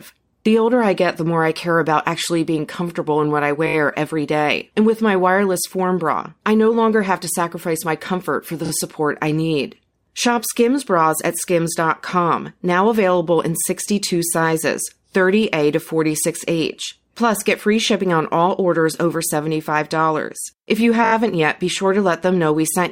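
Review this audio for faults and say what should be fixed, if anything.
Two short stutters interrupt the speech. At 8.65 to 8.71 s, between "my comfort for the" and "support I need", a 30 ms slice plays twice more. At 21.04 to 21.13 s, just before "yet be", a 20 ms slice repeats four extra times. These are repeated frames: a short run of compressed frames was written or sent again, so the decoder replays it, adding 60 ms and 80 ms. Deduplicating frames by sequence number or timestamp before decoding would prevent this.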